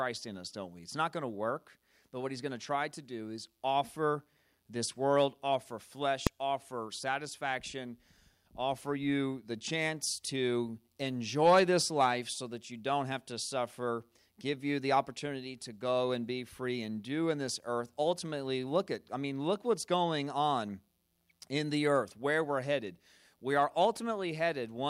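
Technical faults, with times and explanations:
6.27 s: invalid numbers at full scale. Part of the processing produced infinite or undefined values, and these were clamped to the largest value the format can hold, so the output sat pinned at one extreme value, far beyond the speech peaks, for about 1.33 ms, which fits a 64-sample processing block. Because the block is so short, the jump to full scale and the drop back merge into a single sharp bang, far louder than the surrounding speech.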